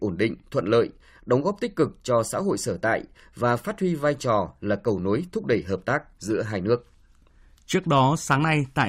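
Nothing in the speech stood out as a technical fault on listening.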